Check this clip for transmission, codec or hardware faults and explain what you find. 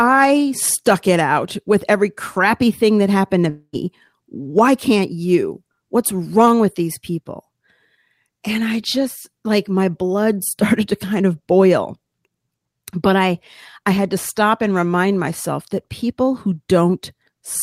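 One transmission fault is present. From 3.49 to 3.76 s there is a long network dropout. The sound decays into a fading buzz or hiss and then goes briefly silent, likely from the receiver concealing audio that never arrived. Unlike a short packet glitch, about 0.24 s is lost outright.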